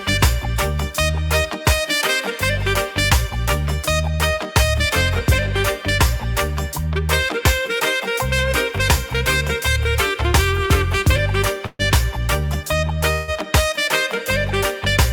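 At 11.66 to 11.82 s and again at 13.13 to 13.31 s, a call audio freeze stretches the last sound into a fading buzz for about 130 ms and 150 ms, the first ending in a brief silence. Likely cause: delayed packets draining the jitter buffer. Unlike packet loss, nothing is skipped; the audio resumes where it stopped, just later.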